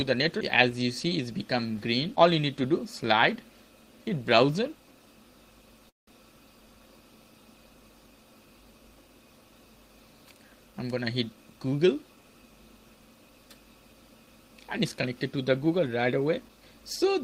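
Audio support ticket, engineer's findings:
Call audio freeze, 5.89 to 6.09 s: last sound briefly carried on, then fades to near-silence for roughly 160 ms, then the audio resumes exactly where it stopped. Likely a late-packet stall draining the jitter buffer, adding 179 ms of delay. Unlike packet loss, nothing is cut out.

Jitter buffer speed-up, 11.29 to 12.31 s: audio runs hurried, about 118% speed, pitch unchanged. The receiver repeatedly trims pitch-period-length slices to shed surplus buffered audio, roughly a fifth of a second in total. A constant pitch distinguishes this from a resampling or clock error.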